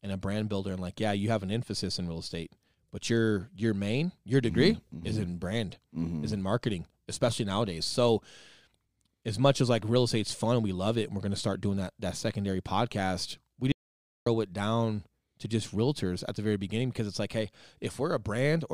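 At 13.72 s the input feeding the recorder most likely dropped out, perhaps through a lost connection or a momentary mute, while the recording kept running and filled the gap with silence. The result is an audio dropout to silence lasting about 0.54 s, until 14.26 s. The speech stops abruptly mid-flow, the background room tone vanishes with it, leaving dead silence, and whatever was said in that half-second is simply missing when the sound snaps back.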